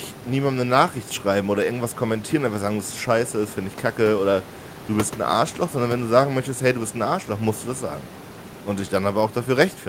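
Nothing in this speech recording stood out as a technical fault on listening, and the room's background noise sits about 19 dB below the speech as part of the recording itself.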